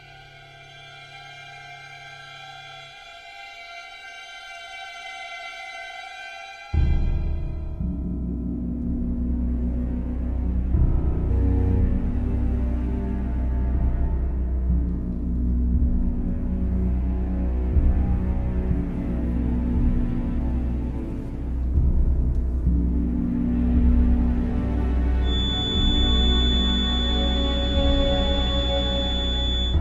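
From 25.19 s to the end, a feedback whistle creeps in: a thin, steady tone at 3.5 kHz sitting a little under the sound, swelling and fading slowly in level. It's likely a speaker-to-mic loop hovering right at the edge of feedback without running away.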